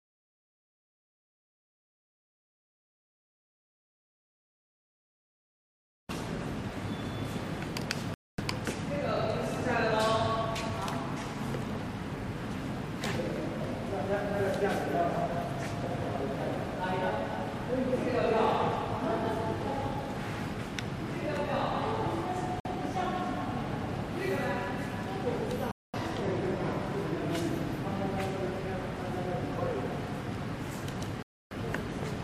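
At 8.14, 22.60, 25.71 and 31.23 s the audio drops to silence for roughly 243, 51, 223 and 287 ms, then resumes: likely Bluetooth stalls, the headphone buffer running dry.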